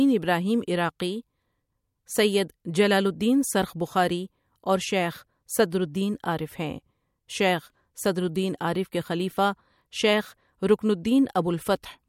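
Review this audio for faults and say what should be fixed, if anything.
Pre-echo at 5.70 s: about 17 dB of hiss spreads 19 ms ahead of a sharp attack, consistent with a roughly 26 ms transform block without short blocks. Prevent it by enabling short-block switching on transients.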